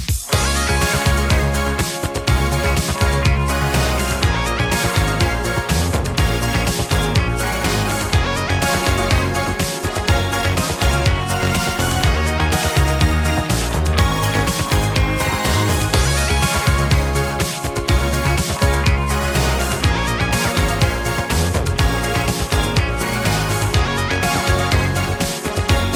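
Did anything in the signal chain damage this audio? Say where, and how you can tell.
No, no signal-chain damage heard.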